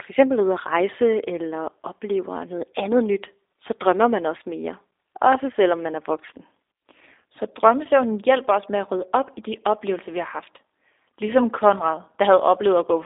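G.729 codec damage runs through the whole speech clip: the sound is rebuilt from a vocal tract filter, a pitch predictor and sparse pulses, which fits an 8 kbit/s stream. It leaves a plainly rough, synthetic texture, a 300 Hz to 3.7 kHz band, and nothing above 3.8 kHz.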